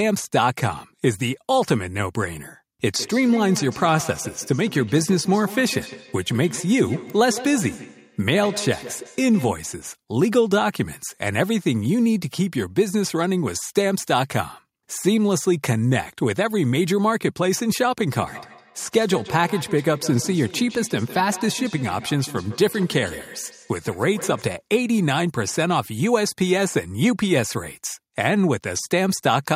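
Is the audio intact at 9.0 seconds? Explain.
No. At 9.0 seconds the clip is inside a feedback echo between two devices, running from 2.96 to 9.83 s: a second device on the call replays the speech into a nearby microphone, whose echo canceller can't remove it. Each stretch of speech returns roughly every 150 ms, thinner and ringing, up to about 14 dB below the speech.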